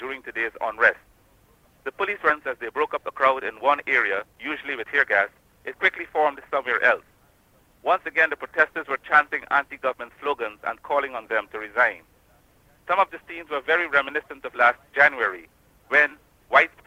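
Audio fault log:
2.29–2.31 s, skip ahead: playback jumps forward with no fill, dropping about a second of sound as a stretch of audio is dropped while later audio is already queued. The two sides of the cut are spliced almost directly, so material simply vanishes rather than pausing.
4.08–6.73 s, jitter buffer speed-up: the receiver trims short pitch-period-sized pieces repeatedly to drain excess buffered delay, removing about 0.3 s in total. The sound runs at about 112% speed without any pitch shift, so it comes across as hurried.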